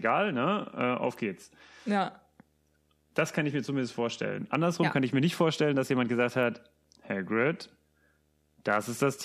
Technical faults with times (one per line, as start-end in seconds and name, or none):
0.00-9.24 video or display buzz